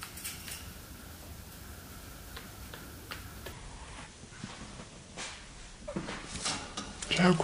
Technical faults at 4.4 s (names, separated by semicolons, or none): section at the wrong speed